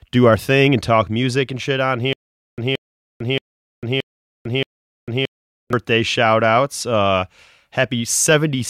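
From 2.13 to 5.73 s, right after "music and shit on", the player or stream likely stalled and kept retrying, replaying its last buffered fragment each time before running dry. The result is a stutter with silent gaps: a 176 ms burst of speech repeats five times at a steady 625 ms pace, each followed by about 449 ms of dead digital silence. Whatever was said in that stretch is lost, and normal speech resumes at "shout outs".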